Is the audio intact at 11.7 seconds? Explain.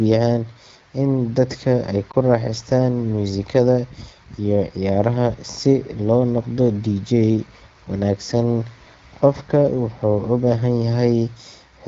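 Yes, at 11.7 seconds the speech is intact, with no fault audible beyond the ordinary sound of an AMR wideband (HD Voice) link running at 12.65 kbit/s.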